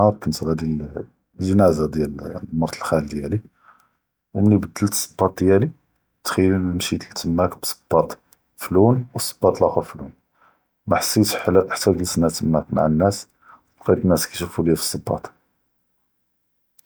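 Nothing in the speech recording stood out as a technical fault on listening.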